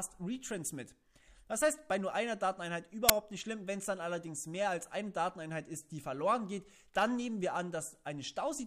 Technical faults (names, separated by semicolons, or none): file tags played as audio